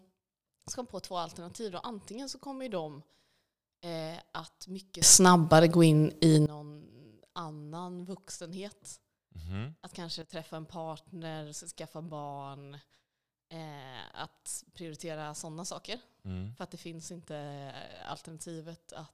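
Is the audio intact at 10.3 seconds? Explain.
No. A sudden gain jump occurs between 10.22 and 10.32 s, just before "en partner skaffa barn". The speech and its background noise drop together by about 12 dB in one step, likely from a digital gain change applied instantly rather than ramped.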